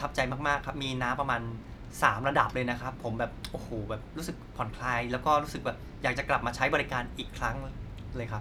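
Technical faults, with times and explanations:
No technical faults can be heard in the speech.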